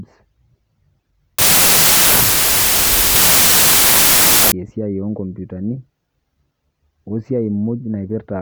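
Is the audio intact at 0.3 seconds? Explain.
Yes, the audio is intact at 0.3 seconds, with the speech there free of any audible fault.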